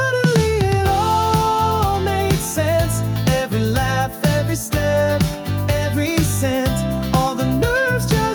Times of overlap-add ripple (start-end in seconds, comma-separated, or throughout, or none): none